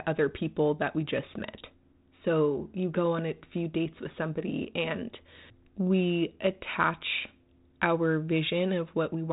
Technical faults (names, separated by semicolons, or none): none